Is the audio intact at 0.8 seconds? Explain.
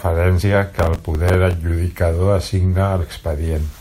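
No. At 0.8 seconds the speech is inside a burst of processor overload crackle running from 0.79 to 1.54 s. The processor repeatedly misses its deadlines for very short buffers, and each miss replays a fragment of stale audio with hard edges, heard together as gritty tearing across the speech.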